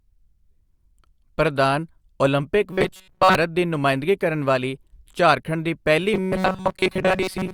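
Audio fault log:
2.73–3.35 s and 6.14–7.53 s, robotic sound from repeated short buffers: right after "ਪ੍ਰਧਾਨ ਓਲੰਪਿਕ" the speech goes to a stiff, metallic buzz at 188 Hz until "ਦੀ ਨੁਮਾਇੰਦਗੀ ਕਰਨ ਵਾਲੀ". It comes back at 6.14 s and lasts to the end. Most of the stretch sounds looped rather than new. That's likely the playback repeating a tiny chunk of about 5.3 ms, which fits a buffer around that size, while fresh audio is dropped. The loop rate sets that fixed pitch.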